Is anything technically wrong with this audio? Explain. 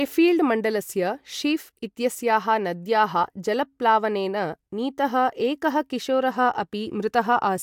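No, nothing technically wrong can be heard anywhere in this speech recording.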